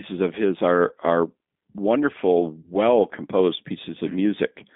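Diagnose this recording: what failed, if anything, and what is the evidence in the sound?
The codec stage is at fault for the whole clip. The speech has the rough, slightly synthetic texture of the G.729 codec, and the damage is plainly audible. The band runs only from about 250 Hz to 3.6 kHz. The encoder models each short frame with a vocal tract filter, a pitch predictor and a few pulses. The result keeps the words clear but loses natural detail. This sound fits the 8 kbit/s G.729A variant.

The network stage fails briefly, and the decoder covers the gap with packet loss concealment. Just after "his are are wonderful", from 2.61 to 2.71 s, the speech is stretched into a sound that weakens. The missing stretch is about 30 ms, which fits three lost 10 ms frames. The decoder repeated its last pitch and filter at falling gain. Because each frame builds on the one before, the distortion lasts past the gap itself.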